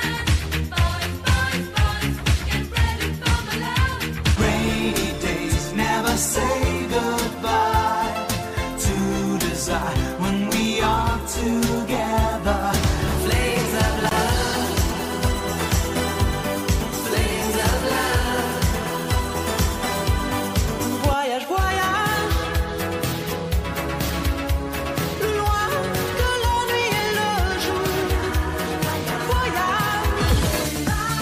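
At 14.91 s and again at 26.98 s, compressed frames are skipped: roughly one 23.2 ms frame is lost, so the audio jumps ahead by about 20 ms.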